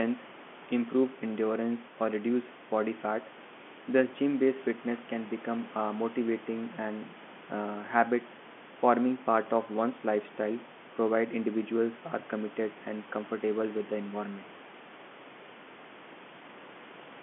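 No technical faults can be heard: the speech comes through the ordinary telephone coding with its narrow band of about 200 Hz to 3.4 kHz and nothing above 3.8 kHz, while the room's own background noise sits about 18 dB below the speech.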